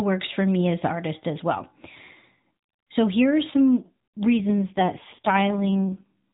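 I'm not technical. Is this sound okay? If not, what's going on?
No. The recording is speech over a mobile phone line, so it sounds thin and phone-like throughout. At 4.38 s, just after "here are some", there is an AMR rate drop. The voice turns rougher and more robotic until 6.12 s. It does not cut out, and the phone-like sound stays the same. What happened is that the phone codec switched to a much lower quality setting to survive a weak signal, then recovered.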